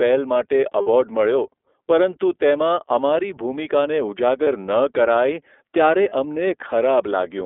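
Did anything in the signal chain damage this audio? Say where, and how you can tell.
Yes. The codec stage is the main culprit. The audio has been through the iLBC codec. The band runs only from about 300 Hz to 3.5 kHz, which a spectrogram shows as a hard empty ceiling. The speech is rough and slightly synthetic, which fits the 30 ms, 13.33 kbps mode.

The network stage adds lost iLBC frames. A 60 ms gap runs from 0.81 to 0.87 s, and 30 ms gaps fall at 4.43 and 6.09 s. Each one sounds like a brief held, buzzy vowel, as the decoder repeats the last pitch cycle with noise. On a waveform these gaps show as short, regular repeats, and the speech recovers cleanly right after each one.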